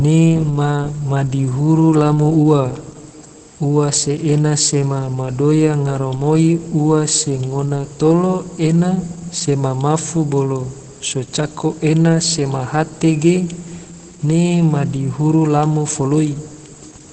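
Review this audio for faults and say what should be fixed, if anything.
Throughout, the speech sounds muffled, hoarse and slightly robotic, with nothing above 8.4 kHz. This is Opus voice compression: its SILK coder narrows the band and codes coarsely at what sounds like around 12 kbps. To prevent it, encode at a noticeably higher bitrate.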